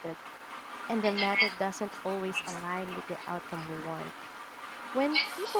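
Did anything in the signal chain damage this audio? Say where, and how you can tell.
Yes. The other side's voice leaks through from 0.0 to 5.59 s, a separate talker about 10 dB down, likely an incomplete echo canceller in call processing. Unlike reverb, it's distinct speech rather than a smeared tail.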